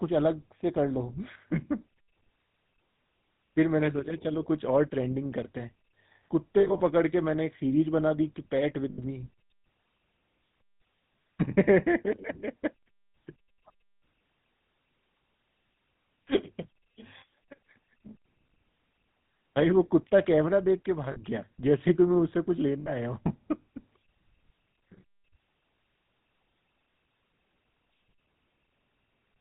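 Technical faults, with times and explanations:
Throughout: GSM full-rate codec. The speech has a buzzy, gravelly roughness and a dull top with nothing above 4 kHz, a level of damage that fits the 13 kbps full-rate coder. This coder rebuilds the voice from a vocal-tract filter driven by a sparse train of regularly spaced pulses, keeping only one excitation sample in three. The missing fine detail of the source comes back as that grainy buzz.
6.60–6.81 s, 8.90–8.99 s, 21.12–21.18 s and 22.81–22.92 s: lost GSM frames. At each of these points the sound briefly freezes into a rough, metallic ring. The decoder replaces each bad frame by repeating the last good one. The longest gap, at 6.60 s, loses 120 ms of audio in breaks spread over 200 ms, the longest about 70 ms. The others last 80 ms, 40 ms and 60 ms.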